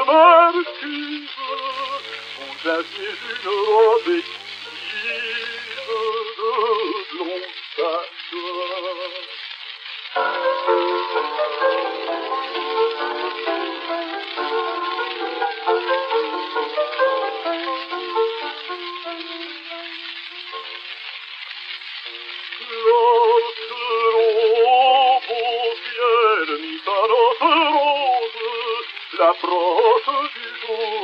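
A thin, steady 100 Hz buzz rich in harmonics, well below the main sound, runs from 1.71 to 6.09 s: DECT cordless phone buzz, where nearby 10 ms radio bursts are rectified by the audio circuitry.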